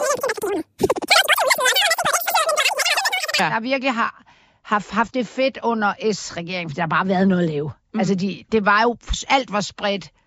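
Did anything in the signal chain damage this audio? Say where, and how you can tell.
Yes. From 0.0 to 3.39 s the speech plays at a wrong sample rate at the playback stage. It runs about 2.76 times too fast and sits roughly 17.6 semitones high, which fits 16 kHz material being clocked out at 44.1 kHz with no conversion. On a spectrogram that stretch shows harmonics and formants pushed far up and syllables squeezed short. The waveform looks compressed in time until normal-rate audio resumes.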